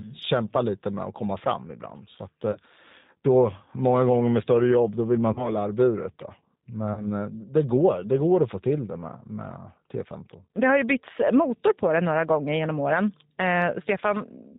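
Throughout, the speech passes through the G.729 codec at 8 kbit/s, which rebuilds it from a filter and a handful of pulses, leaving it plainly rough, synthetic and cut off above 4 kHz. At 2.52 s, 5.33 s just after "jobb då vill man", and 6.94 s just before "eh det går det", 30 ms of audio goes missing, which fits a single lost packet each time. Packet loss concealed by the speech codec fills each gap by extending the last sound into a fading buzzy tone or coloured noise. The voice stays weak or distorted until 2.58 s, 5.53 s and 7.05 s.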